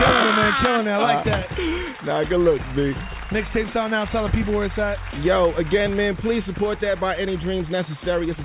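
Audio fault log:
No fault can be heard anywhere in the audio. There is nothing to log for this clip.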